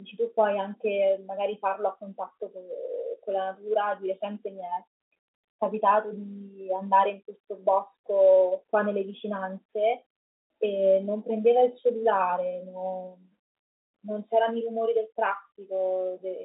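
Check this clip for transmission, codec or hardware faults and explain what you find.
No faults detected.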